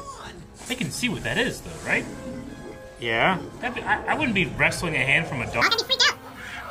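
From 5.62 s to the end at 6.71 s, the audio is read two samples at a time and plays at double speed (2.0x). The reader treats each sample pair as one frame, so the sound jumps an octave. A spectrogram shows every harmonic at twice its frequency with wider spacing. The waveform looks squeezed horizontally.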